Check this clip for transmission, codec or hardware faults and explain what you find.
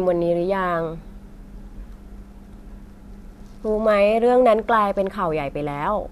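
Nothing faulty can be heard anywhere in this speech.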